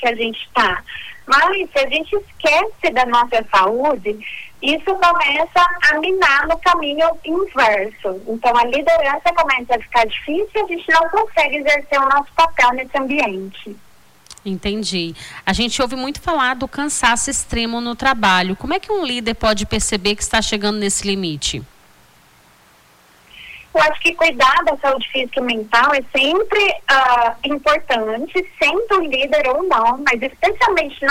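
From 3.43 to 4.06 s and again from 7.19 to 7.74 s, the sound drops 5.7% in speed and about a semitone (101 cents) in pitch, then snaps back. This is a drift correction step, likely from clock-matching software. On a spectrogram, every harmonic steps down briefly and returns.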